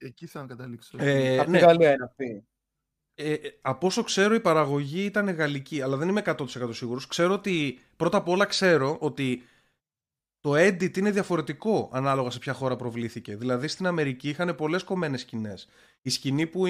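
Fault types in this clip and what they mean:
Nothing stood out as a fault on listening to this speech recording.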